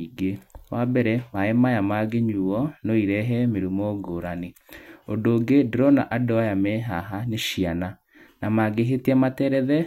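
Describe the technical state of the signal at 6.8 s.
At 6.8 s the speech signal is intact, with no audible technical fault at that moment.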